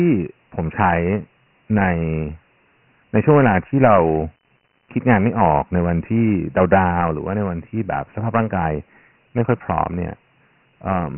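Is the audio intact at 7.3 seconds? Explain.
No, Dialogic VOX ADPCM runs through the whole clip, so at 7.3 s the speech has a gritty hiss from heavy 4-bit coding and nothing above 3.1 kHz.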